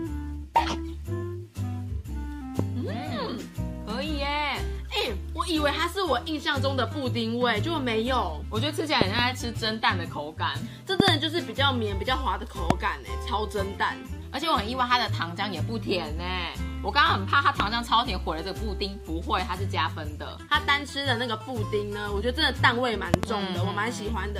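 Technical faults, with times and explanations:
2.59 to 23.26 s, loud pop: Nine sharp pops sit on top of the sound, which carries on underneath. They fall at 2.59–2.62, 9.01–9.21, 11.00–11.10, 12.70–12.73, 17.60–17.62 and 23.14–23.26 s. Those at 9.01, 11.00 and 23.14 s are double pops. Peaks run from about 15 dB to about 25 dB above the sound. A sudden voltage pulse, likely from a plug, switch, static or driver glitch, entered the signal and was shaped into a thump.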